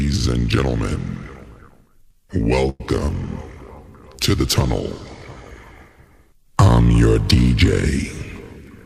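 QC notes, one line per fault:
2.69–2.81 s call audio freeze: a fading buzz ending in 20 ms of silence, then the sound resumes intact but 105 ms late; likely delayed packets emptied the jitter buffer.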